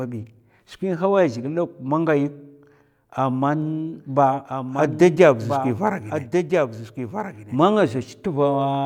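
A speech recording with a doubled audio track from 3.62 to 7.56 s: a second full-band copy of the speech runs about a second and a half behind the original, a few decibels quieter, with no decay or room colour. It likely comes from the signal being captured again through a slower path. On a spectrogram, the same harmonic patterns repeat, shifted right and slightly fainter. The waveform shows overlapping envelopes that begin and end abruptly at those times.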